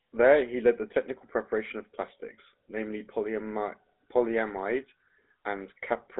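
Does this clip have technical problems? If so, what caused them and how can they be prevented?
Yes. The speech carries GSM full-rate codec damage from start to finish, plainly audible. The codec rebuilds the voice from a vocal-tract model excited by regularly spaced pulses, which gives the buzzy, gravelly texture heard here, a quality that fits its 13 kbps rate. The sound sits in a telephone band of roughly 300 Hz to 3.6 kHz, with nothing above 3.8 kHz. A simple telephone-band filter would sound thin but smooth; the added roughness is what points to GSM. To prevent it, record or route the call over a wideband path instead of a GSM full-rate link.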